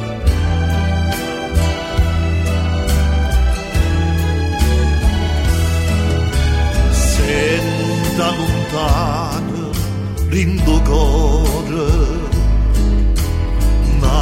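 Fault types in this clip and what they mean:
Repeated frames: a brief stutter at 2.35 s to 2.39 s, where a 23.2 ms slice of sound plays twice more in quick succession. That block size fits a single compressed frame being duplicated before decoding, which stretches the audio by 46.4 ms.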